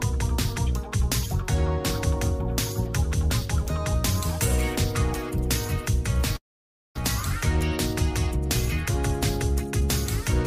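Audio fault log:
6.36–6.98 s, long network dropout: Right here the sound stops being fresh and the receiver just carries the last bit forward as a buzzy hiss that fades out, then there's about half a second of near silence before things pick up again. When it resumes, roughly 0.5 s of material is simply gone. That pattern likely comes from a run of packets that never arrived, and the playout timing seems to shift by around a tenth of a second afterwards.
9.51–9.82 s, jitter buffer speed-up: This stretch plays at about 115% speed while the pitch stays put, so it comes across as rushed rather than higher. The receiver had more audio queued than it wanted, so it trimmed out short pitch-period-sized slices one after another, something like 50 ms in total over that third of a second, to pull the delay back down.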